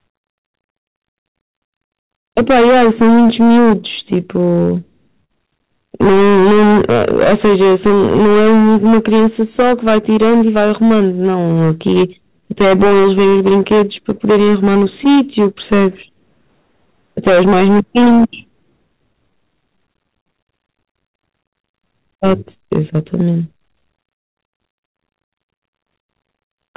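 Somewhere before the call codec, this speech was pushed about 15 dB past what a stage could pass, so roughly one sample in seven is sliced flat. That hard clipping lays a harsh, gritty fuzz over every louder syllable for the whole recording, spraying harmonics upward until the narrowband limit at 4 kHz cuts them off. That limit fits a G.711-style call path. At the same time, clock drift between sender and receiver has the sending clock running around 4 percent slow, so the jitter buffer keeps running short. The receiver answers with repeated timing corrections from 0.99 s to 26.74 s, playing at about 97 percent speed and adding roughly a second in total through small repeated slivers, heard as a slightly dragging, uneven pace. Between 1.44 s and 15.80 s, scattered short gaps from about ten late or lost packets were patched by extending the preceding sound, roughly 200 ms in all with none much over 50 ms, leaving ticks and smeared moments rather than dropouts. 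Later the buffer ran dry three times, and each short stall from a late packet holds a sound too long with a slight buzz or dip: 20.91 to 20.97 s (41 ms), 24.49 to 24.55 s (42 ms) and 25.56 to 25.62 s (48 ms).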